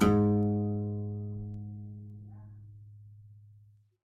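From 0.43 s to 3.77 s the music carries word clock ticks. The receiving device runs on its own clock, not locked to the sender's digital link. The two clocks drift apart. Each time they slip past each other, a single sample is dropped or repeated, with a brief misread around it. The result is a sharp tick. About seven ticks arrive, roughly every half second, at a steady rate. That spacing fits a clock mismatch of around 40 ppm.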